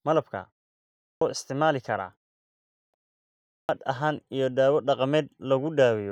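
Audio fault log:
0.87–1.21 s, 2.56–2.94 s, 3.31–3.69 s: clipped start after a pause. After silences of about 0.45 s, the output device sleeps and wakes late. Roughly 0.34–0.38 s of speech is swallowed each time, so speech begins abruptly, the last time before "ahaan iyo dawo".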